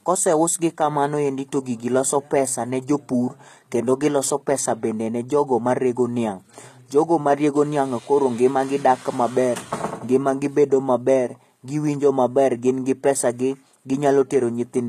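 All the way through, the speech carries what's likely HE-AAC compression at a low rate, around 20 kbps. The treble is rebuilt from copied lower bands rather than coded, so s sounds come out gritty and lispy, and nothing reaches above about 14.9 kHz.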